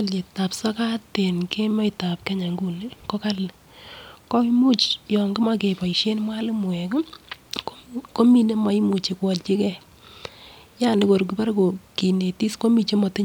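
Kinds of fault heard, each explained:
No kinds of fault are heard in this speech clip.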